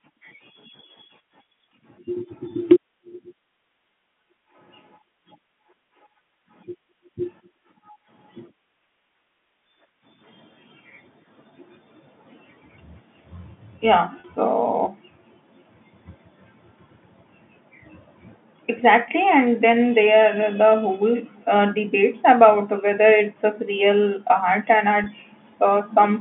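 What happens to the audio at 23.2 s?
At 23.2 s the speech carries on intact, with nothing breaking into it beyond the narrow, telephone-band sound of its G.711 coding.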